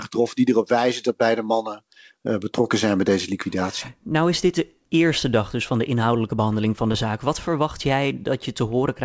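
At 6.92 to 6.96 s, just after "inhoudelijke behandeling van de", there is a short concealed packet loss. About 20 ms of the speech never arrived in time. The receiver covered the gap by extending the preceding sound, then blended back into the real signal. It is heard as a brief smear in the speech. This happens on a call path with nothing above 8 kHz, which fits a wideband codec such as G.722.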